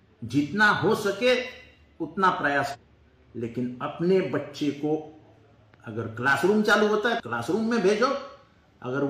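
At 2.70 s the sound breaks for about 60 ms, until 2.76 s. This is damaged data in a compressed stream. Some bytes in the encoded file were lost or corrupted. The decoder could not read the frames there, lost sync and had to hunt for the next valid frame header. It happens again from 7.16 s to 7.20 s, lasting about 50 ms. Each break is heard as a short disruption where the audio stops being continuous.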